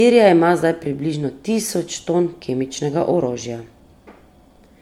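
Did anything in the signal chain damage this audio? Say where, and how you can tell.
Yes, at the codec: the speech sounds swirly, hollow and smeared throughout, with blurred attacks. This is likely generation loss from about five MP3 re-encodes stacking quantisation noise.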